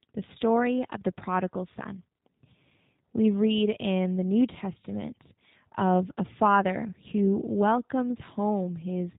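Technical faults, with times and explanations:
Throughout: G.729 codec. The speech was rebuilt from a vocal tract filter, a pitch predictor and a few pulses per 10 ms frame, which fits an 8 kbit/s link. Nothing above 4 kHz survives, so the voice sounds dull, rough and audibly synthetic.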